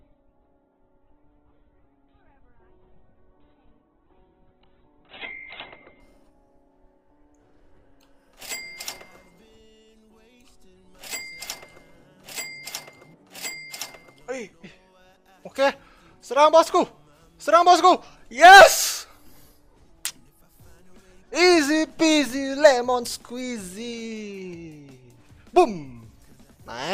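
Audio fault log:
0.0–6.0 s, adaptive stream starting at a low bitrate: the player opened on a very lean version of the stream so playback could begin at once, then switched to a richer one after gauging the connection. Over those first six seconds nothing is present above about 4.2 kHz, so the audio sounds dull and boxy, with stronger codec smearing; the start points to something near 8 kbit/s. At 6.0 s it jumps to fuller quality, likely around 64 kbit/s, without any gap.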